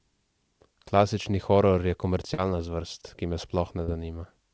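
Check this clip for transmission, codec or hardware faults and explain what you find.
Two brief dropouts mark this speech clip, at 2.34 to 2.40 s and again at 3.84 to 3.90 s, each heard as a short smear or wobble where the sound briefly loses its natural movement before settling back. Both are short concealed packet loss: about 40 ms of audio failed to reach the decoder in time, and the receiver covered the gap by extending the preceding sound, carrying its pitch forward for voiced parts or shaped noise for unvoiced ones, then crossfading into the real signal. A short consonant inside either window can disappear. Across the clip, the band stops at 8 kHz, consistent with a wideband call codec running at around 64 kbps.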